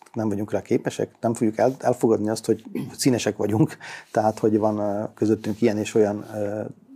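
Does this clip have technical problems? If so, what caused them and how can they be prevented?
Yes. From 4.76 s to the end at 6.95 s, the sound picks up a rough, metallic edge. This is periodic clock jitter. Interference is modulating the converter's sampling clock at around 1 kHz, so every component of the signal gains sidebands roughly 1 kHz above and below it. The effect is strongest on high-frequency content and disappears wherever the signal falls silent. It can be prevented by giving the converter a clean, well-isolated clock supply and keeping interference sources away from its clock circuitry.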